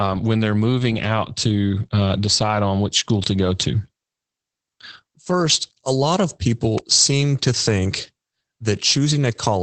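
This is a speech clip with Opus voice compression audible throughout. The top end stops at about 8.5 kHz, and the voice has that slightly muffled, hoarse, faintly robotic edge of the SILK coder squeezing the excitation hard, which fits a wideband setting at roughly 12 kbps. At 6.78 s, right after "a lot of" and just before "seem to think", there's a single sharp snap sitting on top of the voice, most likely an electrical switching spike from a nearby switch or discharge arcing onto the line.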